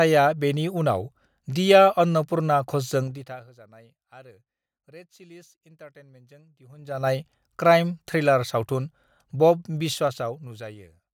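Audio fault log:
3.02–3.48 s, 6.68–7.08 s, 9.74–10.86 s: zipper noise. The level falls by about 25 dB, rises by about 25 dB, then falls by about 15 dB in unsmoothed 2 dB jumps. Each jump clicks, giving a ticking at around 30 steps per second in the first two changes and about 7 in the last.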